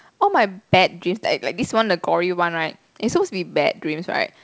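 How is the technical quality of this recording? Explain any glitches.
No glitches can be heard anywhere in this recording.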